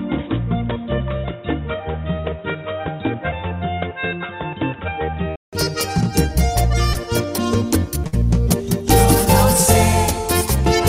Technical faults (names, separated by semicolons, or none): input switched to a poorer device; short concealed packet loss; burst of packet loss